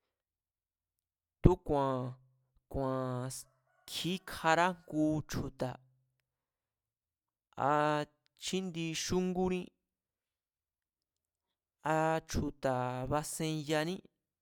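Nothing technically wrong turns up in this short stretch of speech; there's no fault to point to at any time in it.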